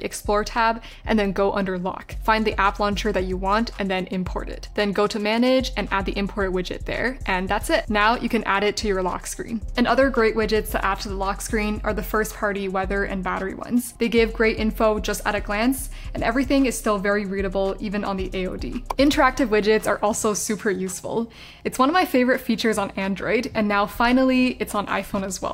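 No technical faults can be heard anywhere in the clip.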